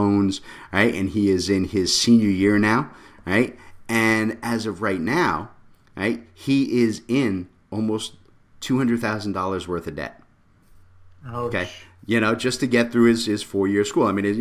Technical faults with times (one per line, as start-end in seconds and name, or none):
none